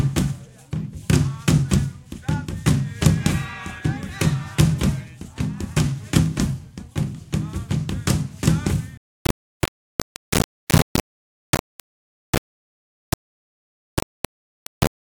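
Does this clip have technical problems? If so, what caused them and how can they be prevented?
Yes. Low bit depth without dither, from 8.97 s to the end: grainy distortion nearly as loud as the sound itself, likely from rounding to about 3 bits. Prevent it by keeping full bit depth and adding dither before any reduction.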